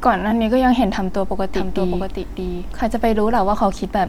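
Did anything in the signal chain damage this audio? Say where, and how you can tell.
Yes. From 1.55 s to 3.39 s the speech has a doubled audio track: a full-band copy about 5 dB quieter trails roughly 0.7 s behind, with no decay, and cuts in and out abruptly. This is likely a slower second capture path or an edit holding two out-of-step copies.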